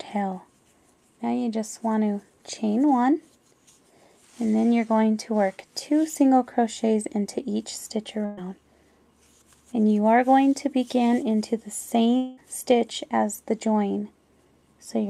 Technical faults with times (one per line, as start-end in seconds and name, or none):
8.25-8.39 burst of packet loss
12.17-12.39 long network dropout